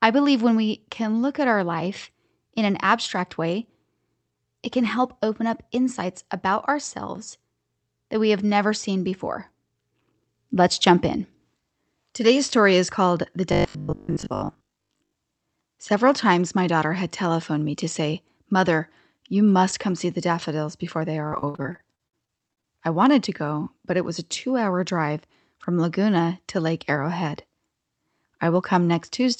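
From 13.53 to 15.13 s the speech turns into a rigid, metallic buzz pitched at 50 Hz. This is robotic sound from repeated short buffers. The likely cause is audio arriving too seldom, so the last 20 ms or so was replayed over and over in place of fresh signal, with most of the real sound in this stretch skipped. Its mark is that steady, unchanging buzz pitch riding under speech that still roughly follows its shape.

From 21.27 to 22.66 s the sound turns choppy and robotic in a different way. This is repeated packet loss. Many short holes, none longer than 55 ms, were patched by stretching the preceding sound, so about 0.43 s of the span is concealment while roughly the same amount of real audio is missing. Unlike the buzz earlier, this is broken, stuttering gaps across about a third of the stretch.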